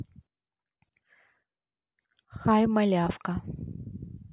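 A speech recording with no audible technical faults.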